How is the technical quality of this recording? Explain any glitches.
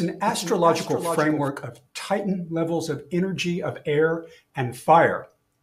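There's one glitch worth flagging: a doubled audio track right at the top, already going when the clip opens and running until about 1.48 s. A second full-band copy trails the main sound by roughly 0.4 s, sitting around 10 dB quieter, with no decay or room colour, just a dry repeat. That's most likely a second capture over a slower path, or an edit leaving two copies out of step, and it cuts off abruptly at 1.48 s.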